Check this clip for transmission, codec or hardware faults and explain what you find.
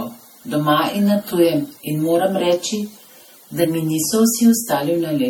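The speech carries generation loss from start to finish. It has a swirly, smeared, hollow quality, with consonant attacks blurred and a watery wash around the voice. That's more damage than a single MP3 pass at this rate would do. The likely cause is an MP3 copy at around 64 kbit/s being decoded and re-encoded about five times, with each pass requantising on a shifted frame grid so the noise and spectral gaps stack up.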